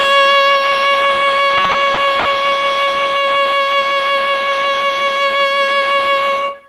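From 1.57 to 2.27 s the music suffers repeated stalls (stutter): five brief hitches, the longest about 60 ms, where playback holds the last sound before moving on. Packets were arriving behind the playback clock, so the jitter buffer kept running dry and the receiver stretched what it had, about 140 ms in total, a fifth of that span. Unlike packet loss, nothing is cut out; the passage drags and hiccups rather than skipping ahead.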